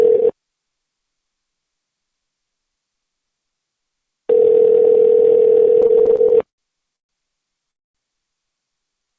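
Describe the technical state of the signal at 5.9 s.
At 5.9 s the sound is inside a stretch of repeated stalls (stutter), from 5.82 to 6.60 s. Late packets kept draining the jitter buffer, so the receiver extended the last sound ten times, about 201 ms in all, with the longest fill 79 ms and nothing lost. It drags and stutters. On a waveform the fills show as short repeated copies of the preceding cycles. On a spectrogram they appear as smeared, horizontally stretched bands, all below the 8 kHz ceiling of the G.722 call path.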